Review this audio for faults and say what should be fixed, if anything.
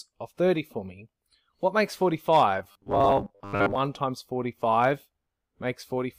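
From 2.59 s to 3.79 s the sound turns into a rigid, metallic buzz at a fixed 100 Hz that still loosely tracks the underlying audio. This is robotic sound from repeated short buffers: new data likely arrived too slowly, so playback kept re-sending the last block, and a 100 Hz buzz fits a repeated segment of about 10 ms. Roughly half of the material in that stretch is repetition, with the original audio skipped. Prevent it by enlarging the playback buffer and fixing the upstream delivery stall.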